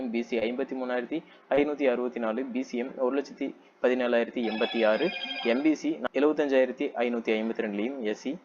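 At 0.39 to 0.43 s and again at 1.55 to 1.59 s there is short concealed packet loss. Each time about 20 ms of audio arrived too late to decode. The receiver extended the preceding sound to fill the gap, then blended back. Each gap is heard as a brief smear or wobble.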